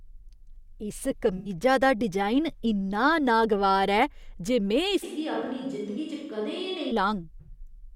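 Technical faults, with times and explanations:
1.37–1.49 s, AAC frame loss with concealment: about 85 ms of the stream is missing. That span fits roughly four AAC frames of 1024 samples at 48 kHz. The decoder patched the gap by reusing the last good spectrum with randomised signs and smoothed energy. That synthetic fill keeps the overall level but loses the real phase and detail, so the speech turns briefly smeared, noisy and phasey before clean decoding resumes.
5.05–6.90 s, switch to a distant microphone: the speech abruptly turns roomy and hollow, with thinner low end. The level drops by about 5 dB and room noise rises to about 40 dB below the speech. The likely cause is that the close microphone dropped out and a farther one, such as a camera microphone, carried the signal. The greater distance adds reflections and loses proximity bass, and the sound switches back just as suddenly at 6.90 s.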